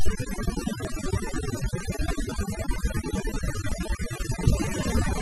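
Overdone noise removal runs throughout: the background is near-silent and flecked with twinkling specks, unlike a steady hiss or a muffled low-pass. Brief skips fall at 0.85, 1.80, 2.76 and 3.72 s, roughly a second apart, each dropping around 40 ms with the edges butted together rather than leaving a silent gap. The likely cause is audio missing between chunks during recording or processing.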